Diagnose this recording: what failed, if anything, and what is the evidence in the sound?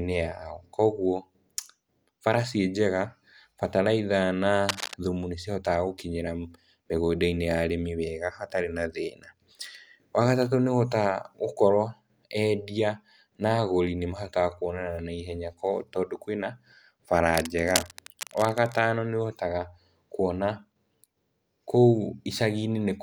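Cable scratch noise in the analogue wiring: right after "bataraitha na", dense rustling scratches sit over the speech from 4.67 to 4.94 s at about 5 dB below it, and again from 17.29 to 18.79 s at about 10 dB down. The likely cause is a worn cable or connector being moved, so its contact resistance jumps about. Unlike isolated digital clicks or dropouts, the speech continues underneath, masked by an uneven noise burst.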